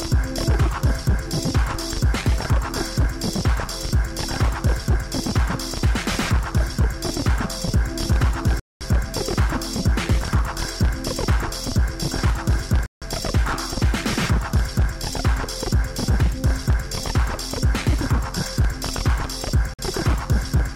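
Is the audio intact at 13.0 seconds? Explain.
No. A Bluetooth stall cuts the audio to silence from 12.86 to 13.02 s, a gap of 156 ms. The likely cause is radio interference delaying packets, so the headphones' buffer emptied and playback paused. Then the sound returns abruptly.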